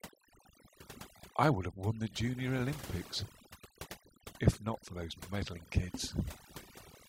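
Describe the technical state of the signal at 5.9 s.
At 5.9 s the speech carries overdone noise removal, present throughout the clip. An aggressive noise reducer is cutting individual frequency bands whenever they sit near its noise estimate, so the background drops and breaks up into twinkling specks. On a spectrogram the gaps between sounds show isolated flickering dots, and the quieter detail of the voice is patchy and torn.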